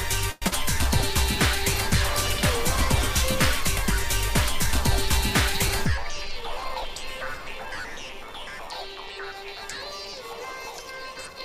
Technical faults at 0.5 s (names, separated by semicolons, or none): call audio freeze; short concealed packet loss